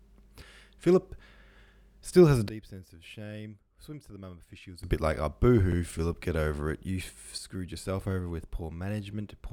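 At 1.68 to 1.72 s, just before "still has a", and again at 5.72 to 5.77 s, overlapping chunks replay about 44 ms of audio. The result is a brief stutter that recurs every 4 s, with nothing dropped or missing.

At 2.49 s, after "still has a", the sound and the background noise fall together by about 18 dB. This is likely a sudden gain jump applied without a ramp, and the level steps back at 4.84 s before "a bit like". At 7.38 s there is a similar abrupt step of about 6 dB down that lasts to the end, a sharp step rather than a fade.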